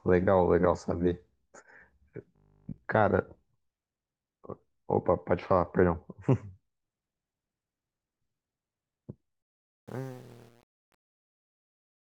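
From 2.36 to 2.78 s the speech turns into a rigid, metallic buzz at 50 Hz that only loosely tracks the words. This is robotic sound from repeated short buffers: audio likely arrived too slowly, so nearly every moment is a repeat of a 20 ms chunk, which fixes the pitch.

From 9.42 s to the end at 12.05 s, the fade-out grows gritty, worst from 9.57 s onward. This is truncation distortion on a fade: the gain stage keeps only 8 bits without dither, so the quietening waveform collapses into coarse steps.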